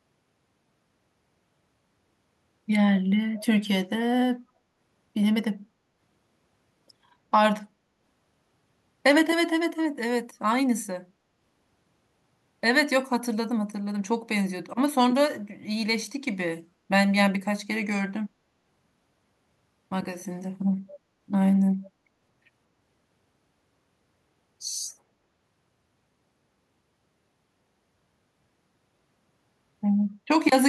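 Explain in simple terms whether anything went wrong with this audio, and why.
Around 3.37 to 3.45 s there's a brief echo leak: a faint, delayed copy of the speech trailing about 230 ms behind the original, well below the main voice. It's just a short scrap. The likely cause is the other end playing the call through a loudspeaker, with its echo canceller failing to scrub out everything its microphone picked up, so a bit of sound bounced back down the line.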